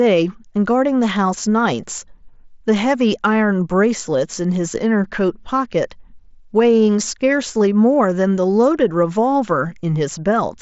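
No faults to report: the speech arrives over the mSBC Bluetooth headset link as designed, with content stopping near 7.7 kHz.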